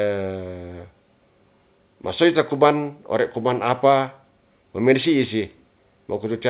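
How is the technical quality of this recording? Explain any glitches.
Nothing stood out on listening to this speech recording, which comes through a call path with a narrow, telephone-like band that has nothing above 4 kHz.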